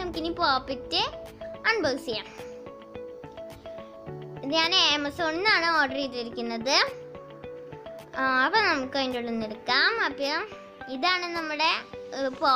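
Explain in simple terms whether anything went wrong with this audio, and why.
Nothing went wrong with this recording that I can hear.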